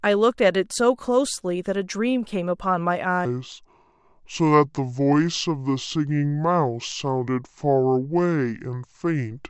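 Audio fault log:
3.25–9.50 s, wrong sample rate: from 3.25 s to the end the speech drops to a low, slow drawl, running at about 0.69 times normal speed and pitched about 6.5 semitones down. Speed and pitch fall together by the same ratio, the signature of samples being clocked out slower than they were captured with no rate conversion between. The ratio fits audio recorded at 32 kHz being played back at 22 kHz.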